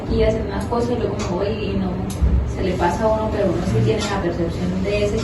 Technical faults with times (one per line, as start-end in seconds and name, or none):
none